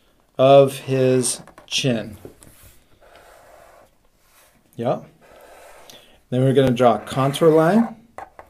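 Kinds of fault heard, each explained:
Overlapping chunks: at 1.63, 4.15 and 6.67 s, a 20 ms slice plays twice where consecutive 2.5 s blocks join, because each block begins before the previous one has finished. The doubled slice gives a brief stutter or click recurring at that steady interval.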